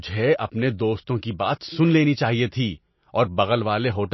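From start to finish the speech carries plainly audible codec damage, most likely MP3 compression at a starved bitrate; the depth of the damage fits something around 26 kbps. Nothing survives above 5.8 kHz, where the encoder has cut the treble, and weak frequency lines blink on and off between frames, giving a watery, swirling texture with chirpy s sounds. That flickering separates it from a plain low-pass filter, which dulls the top without any swirl.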